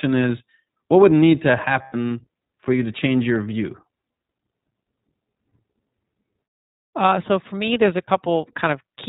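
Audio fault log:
throughout, iLBC codec. The speech is narrowband, with nothing above 4 kHz. It sounds rough and synthetic, and the coding damage is plainly audible. The codec codes each frame's excitation on its own. The sound fits the 20 ms frame, 15.2 kbps mode.
1.82–1.95 s and 8.07–8.09 s, lost iLBC frames. Packets dropped out for 0.12 s, then 0.02 s. The decoder repeated the last pitch cycle mixed with noise, so each gap sounds like a held, buzzy or breathy vowel. This fits six lost frames, then one. Since frames stand alone, the speech recovers almost at once.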